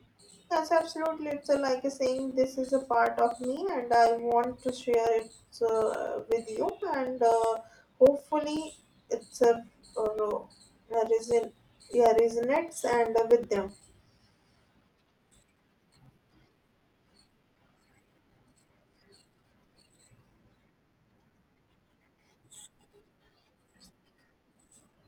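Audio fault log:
0.06–24.93 s, periodic USB or driver dropouts: a steady tick runs through the speech every 0.125 s, eight times a second, roughly 200 in all. Each one is a gap of about 4 ms where the audio simply goes to silence, as if something on the USB bus or in the driver stalls the stream on a fixed timer and that slice never arrives. Because it's a bit of missing signal rather than an added noise, you only hear the ticks while the speech is sounding.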